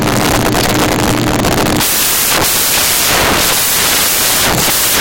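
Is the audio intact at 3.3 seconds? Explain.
No, samples built from the wrong bytes run through the whole clip, including 3.3 seconds. Each sample's bytes are assembled out of order or misaligned, so the rapidly changing low bits dominate, giving loud, harsh broadband noise, close to white on the louder sounds.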